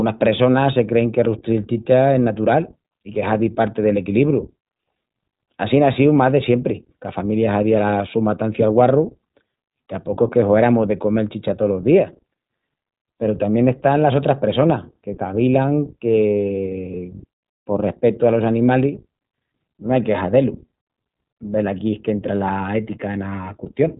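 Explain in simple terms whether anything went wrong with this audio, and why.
The speech was squeezed through the iLBC codec, a low-bandwidth phone-call codec that codes the sound in short, independent chunks, here consistent with 20 ms frames. From start to finish, everything above about 3.8 kHz is cut away, so the voice sounds muffled and narrow, like an old telephone line. The codec's coarse rebuilding of each chunk also leaves a plainly audible roughness, giving the speech a slightly buzzy, synthetic edge throughout.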